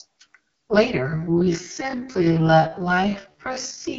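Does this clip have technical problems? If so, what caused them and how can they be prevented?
Yes. The speech was squeezed through the AMR wideband (HD Voice) codec at a rate that fits its lowest mode, 6.6 kbit/s, so its pulse-driven vocal tract model lacks the bits to follow the voice. The whole clip sounds rough and raspy, with only shaped noise above 6.4 kHz. Keep calls at 12.65 kbit/s or higher, where AMR-WB stays clear.

From 1.0 s to the end, the pace abruptly drops to 0.544 times normal speed while the pitch stays put. This is likely a time-stretched section, where software lengthened the audio by repeating short pieces, which leaves the slowed speech dragging. Avoid stretching recordings to fit a length, or use a higher-quality stretching algorithm with a smaller change.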